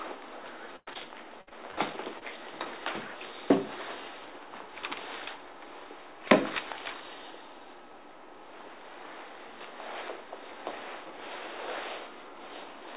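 The audio has come through a narrowband call path, with G.711-style coding noise and nothing above 4 kHz, and it breaks up early in the clip. Bursts of packet loss hit at 0.76–0.91 s, 1.41–1.49 s and 1.71–1.79 s. In each, the receiver extends the last sound as a fading buzz or hiss for about 0.1 s, 60 ms and 60 ms respectively. The first burst also drops to about 30 ms of silence before the audio resumes further on, with material missing. Short concealed packet losses at 0.93–0.97 s, 1.49–1.53 s and 2.19–2.23 s each leave roughly a 20 ms hole. The decoder bridges it by continuing the preceding sound, which gives a brief smear or wobble, and a short transient there can disappear.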